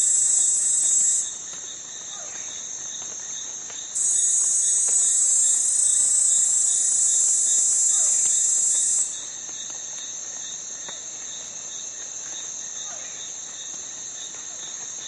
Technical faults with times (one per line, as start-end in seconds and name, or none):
none